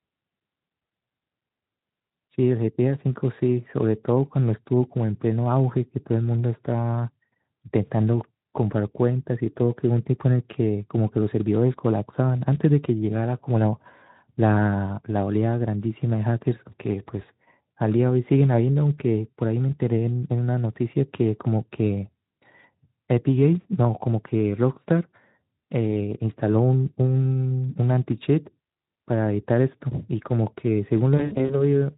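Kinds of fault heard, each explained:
VoIP packet loss concealed by the speech codec: Near the end, from 31.18 to 31.64 s, audio packets went missing in scattered bursts totalling about 160 ms over roughly 320 ms, the longest gap being 60 ms. During each gap the Speex decoder carried on from its last pitch and filter with falling gain, so the speech smears into a buzzy tone or coloured noise that fades, and it stays weak or distorted for tens of milliseconds or more after packets resume.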